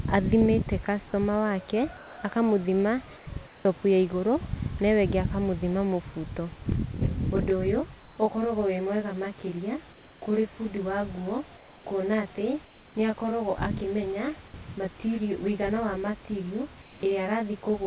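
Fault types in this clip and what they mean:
Comfort noise in place of the background: The sender likely stopped transmitting during pauses, so the receiver filled them with synthetic noise. Seven short gaps, each roughly 0.2 to 0.3 s, lose the real room background to a flat, featureless hiss about 1 to 4 dB quieter.
Onset clipped by the voice detector: The sender's voice detector likely reacted late when sound resumed, so the first 20 ms were never sent. At about 3.63 s, right after a comfort-noise gap, the sound starts abruptly, missing its soft beginning.
Channel delay (comb filtering): One channel arrives about 20 ms behind the other, and summing them to mono cancels shared content at evenly spaced frequencies starting near 20 Hz. From about 6.7 s to the end, the sound turns rough or slightly doubled.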